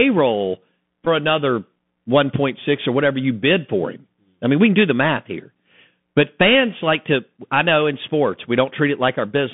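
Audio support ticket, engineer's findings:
Throughout: Bluetooth CVSD headset codec. Narrowband sound, limited to about 150 Hz to 3.5 kHz. Scratchy sibilants. Granular hiss under the speech. One-bit up/down coding with an adaptive step can't track fast high detail. Fits a 64 kbps headset link.

1.05 to 1.08 s: Bluetooth headset packet repeated. Short buzzy burst near 267 Hz. About 11.2 ms of audio missing. The headset chip re-decoded the previous packet's bits every 3.75 ms. This fits about three lost packets. Good packets resume afterwards.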